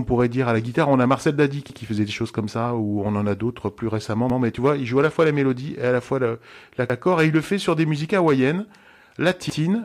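Overlapping chunks in this speech clip at 1.70–1.80 s, 4.30–4.40 s, 6.90–7.00 s and 9.50–9.60 s: 2.5 s blocks each restart 100 ms early, so that slice plays twice, stuttering just before "faisait des choses comme" and just after "a d'autres plus récemment".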